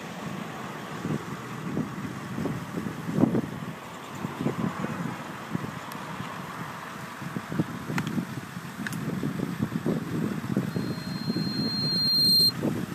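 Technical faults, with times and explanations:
10.71–12.53 s, loudspeaker feedback squeal: a 4.2 kHz tone swells over about 1.5 s to about 10 dB above the sound. The microphone keeps re-amplifying its own loudspeaker there.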